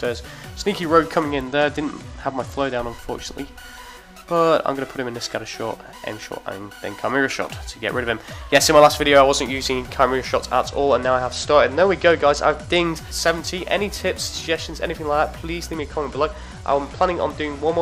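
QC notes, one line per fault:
1.30–2.79 s, 10.68–12.86 s and 15.75 s to the end: Bluetooth SBC bit pool drop. A congested link made the encoder cut its bit budget, which fits a fall from bit pool 31 to 12 (around 88 kbps). Starved upper sub-bands dull the treble and coarse quantisation adds gritty noise until the rate recovers.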